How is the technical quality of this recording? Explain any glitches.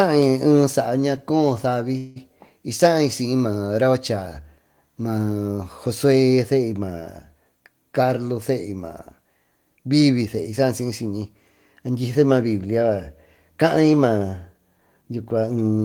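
The recording has two glitches, both typical of a call path under network strain.

From 1.97 to 2.18 s there is a call audio freeze: the last sound is stretched into a short fading buzz or hiss for about 184 ms, and the speech then resumes exactly where it stopped, with nothing lost but the whole stream now running that much later. The likely cause is packets held up in transit so that the jitter buffer ran dry and the receiver extended the last sound. On a spectrogram this shows as smeared, repeating bands that dim with time; on a waveform, a repetitive decaying segment.

From 14.80 to 15.79 s comes a jitter buffer speed-up. The receiver, holding more buffered audio than it wanted, cut many tiny pitch-period slices, roughly 150 ms in all, so the speech runs at about 113% speed with unchanged pitch and sounds hurried. A spectrogram shows harmonics at normal spacing but syllables packed closer together; a waveform shows normally spaced cycles but shorter syllables.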